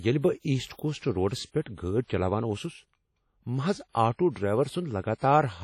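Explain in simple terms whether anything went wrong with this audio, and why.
Yes, something went wrong, and it lasts the whole clip. The speech carries a washy, ringing quality with a hiss that swells and fades along with the talking, and everything above about 16.6 kHz is simply missing. That points to heavy WMA compression, likely from squeezing the file down hard. Unlike steady background noise, this hiss rises and falls with the voice, because the encoder smears its errors across short stretches of sound and drops the quietest detail.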